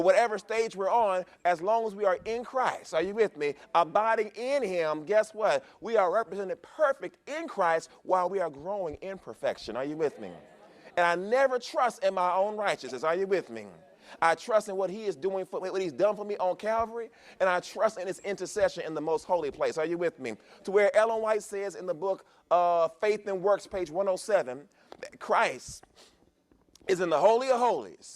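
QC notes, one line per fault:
No faults found in this clip. Nothing in the audio calls for a QC note.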